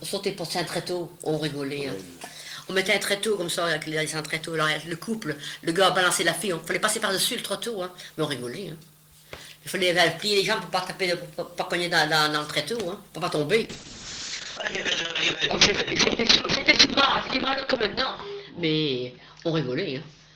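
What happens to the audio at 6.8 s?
Nothing goes wrong at 6.8 s; the audio plays through that point without a dropout, glitch, click or other fault.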